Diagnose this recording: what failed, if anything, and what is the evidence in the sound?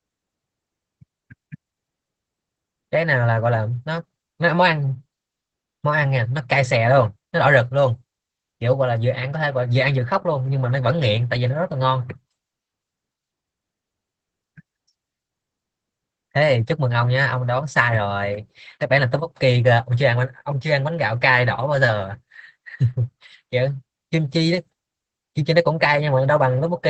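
The codec stage failed: this is Opus voice compression at a low bitrate, audible through the whole speech clip. Nothing above about 8 kHz survives, so the band is cut to wideband. The voice sounds muffled and hoarse, with a faint robotic edge. That points to the SILK linear-prediction coder spending very few bits on the excitation signal, which fits a bitrate around 12 kbps. The damage is plainly audible from start to finish.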